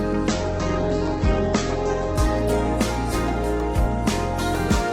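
From 0.31 s to the end, a call bitrate drop cuts the encoder from 128 kbps to 10 kbps and narrows bandwidth from 20 kHz to 8 kHz. Unlike a plain low-pass filter, coarse coding adds a rough, watery texture, worst during 1.63 s at the floor.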